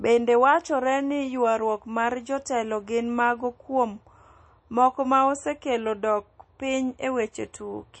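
Speech with plainly audible MP3 compression throughout, likely from a bitrate near 32 kbps; a spectrogram shows a flat ceiling with nothing above 8.4 kHz.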